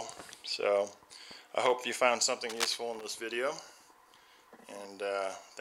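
A short audio clip with one burst of cable scratch noise from 2.49 to 2.76 s: a dense, uneven rasp lasting about a quarter of a second and sitting only a little below the level of the sound itself. It is likely caused by a worn cable, connector or control being moved, its contact resistance jumping rapidly. Unlike isolated clicks or vinyl-style crackle, the disturbance is a continuous rustling cluster that starts and stops with the movement rather than a scatter of separate impulses.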